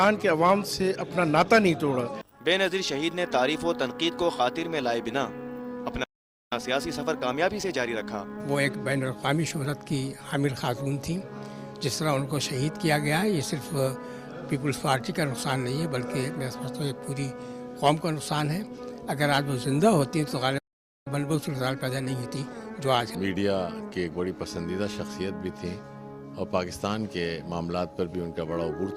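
At 6.03 s the sound cuts out in mid-flow and stays silent for about 0.47 s, resuming at 6.53 s. This playback stall is likely the player running short of buffered data, or its output thread being held up, so nothing reached the output until it recovered. From 6.53 s to 9.53 s the audio comes back hurried but at its normal pitch. This is time-compressed catch-up: to clear the backlog left by the gap, the player trims small slices and cross-fades across the joins, running about 1.15 times faster for those 3 seconds.

The same pattern returns later. At 20.58 s the sound drops out for about 0.48 s, resuming at 21.07 s, and this second playback stall likely has the same starved or blocked playback path behind it. From 21.07 s to 24.07 s the time-compressed catch-up is gentler, about 1.1 times normal speed. The sound is again rushed without any rise in pitch.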